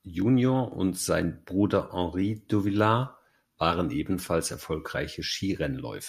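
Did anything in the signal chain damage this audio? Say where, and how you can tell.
Yes, at the driver or buffer stage: periodic USB or driver dropouts. From 0.22 s to 2.22 s the speech carries small ticks spaced precisely every 0.5 s, about five in all, and they sound only where there is signal. Each time, a sliver of well under a millisecond is skipped outright as a background task stalls the bus or driver. That rigid, clock-like spacing separates it from network packet loss, whose gaps are longer and irregular.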